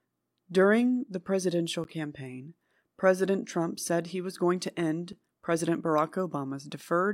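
At 1.84 s, and at 5.13 s just after "he was going to", the speech cuts to a block of digital silence lasting about 10.7 ms and then 5.3 ms. The lengths fit 512- and 256-sample buffers that were not filled in time. Each gap sounds like a tick. On the waveform it is a flat, near-silent stretch with abrupt edges, and on the spectrogram a thin blank strip with sharp edges.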